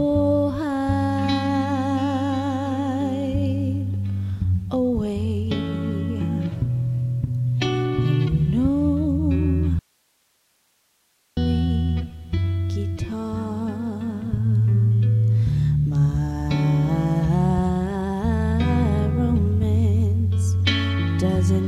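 At 9.79 s the sound cuts off abruptly and only faint hiss remains, far below the normal level, until it returns just as suddenly at 11.37 s, about 1.6 s later. This audio dropout to a faint residue likely comes from a break where the downstream path stayed live.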